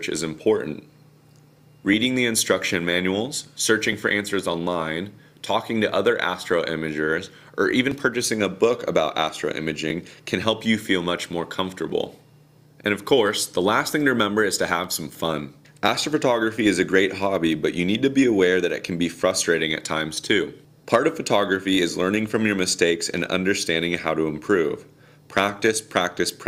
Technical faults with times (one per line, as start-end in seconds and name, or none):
1.93 overlap between stream segments
3.93 overlap between stream segments
5.92 overlap between stream segments
7.91 overlap between stream segments
11.90 overlap between stream segments